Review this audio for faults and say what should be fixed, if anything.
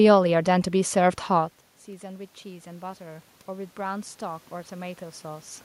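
Automatic gain rising, 0.72 to 5.52 s: after the input fell by about 19 dB, the gain control slowly added about 8 dB, swelling the voice and room noise together. To prevent it, use fixed gain or a slower, limited AGC, and keep the talker at a steady distance from the microphone, since the shift around 1.5 s is the talker moving.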